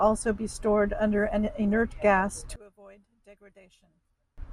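From 2.56 s to 4.38 s the speech drops by about 29 dB, leaving only a faint residue. This points likely to one channel inverted: reversed polarity on one side cancels the centred voice when the stereo pair is summed to mono.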